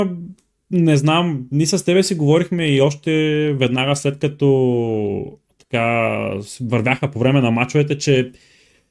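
No technical faults are audible anywhere in the recording.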